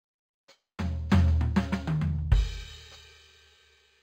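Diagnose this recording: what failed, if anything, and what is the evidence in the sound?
Imaging from linear upsampling at sample-rate conversion: straight-line interpolation from 11 kHz to 48 kHz leaves a faint mirrored band at 5.5–11 kHz, about 35 dB down, visible throughout on a spectrogram.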